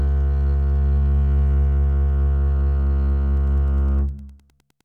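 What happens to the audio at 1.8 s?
Nothing goes wrong at 1.8 s: the music plays through that moment intact, with no dropout, click, distortion or other fault.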